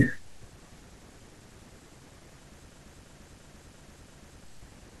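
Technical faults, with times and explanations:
2.73–4.44 s, system hang loop: the speech suddenly locks into a single 341 ms fragment that repeats exactly five times at 2.93 per second, producing a mechanical stutter rather than a buzz. The system stalled while the audio hardware kept replaying its ring buffer, which fits a 16384-sample buffer. About one and a half seconds of audio are lost. Unlike a dropout or a concealed packet, the sound does not go silent or smear. Each repeat is identical and evenly spaced.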